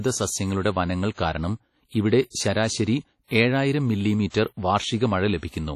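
Across the whole speech clip there is a washy, ringing quality, with a hiss that rises and falls with the signal and nothing at all above 16.2 kHz. This is likely WMA compression at a low bitrate, with the damage pointing to something around 32 kbps. The transform encoder quantises each block so coarsely that its noise smears over tens of milliseconds, and weak detail is discarded entirely, leaving the washy, ringing texture.

At 1.14 s, between "സസ്യങ്ങളുടെ വനങ്ങൾ" and "കാരണം ഇവിടെ ശരാശരി ഏഴായിരം", a short hiss runs ahead of an attack for about 34 ms, and the attack itself sounds softened. This is pre-echo. Because the codec spreads its noise evenly over a block, a sharp onset late in the block fills the quiet moment before it with noise sized for the loud part. It happens again at 5.38 s, where the smear stretches to 53 ms.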